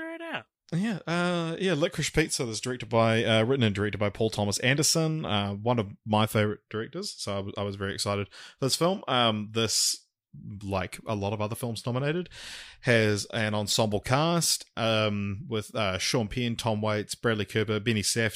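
No technical faults are audible anywhere in the speech recording.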